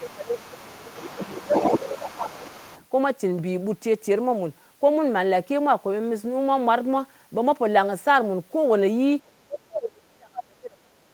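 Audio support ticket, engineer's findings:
Echo canceller likely unable to separate near-end talker from loudspeaker echo during double talk, so its suppressor attenuated both. Speech suppressed in double talk at 0.00–0.93 s (dip about 15 dB), 1.15–1.54 s (about 15 dB), 1.78–2.66 s (about 20 dB). Voice ducks, thins and drops out in pieces. Worst at 9.47 s to end: attenuation about 35 dB.

Echo cancellation incomplete, likely leaving residual loudspeaker pickup in the mic path. Other side's voice leaking through from 0.05 to 2.85 s, roughly 15 dB below the talker. It overlaps the early suppression dips, so the far-end voice persists underneath while the near-end voice is being pulled down.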